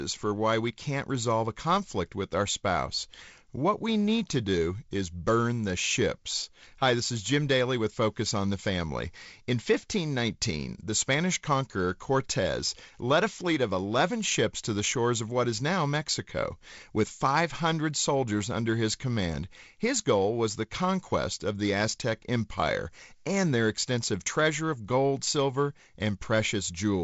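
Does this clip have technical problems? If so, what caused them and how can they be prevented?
No technical problems were found.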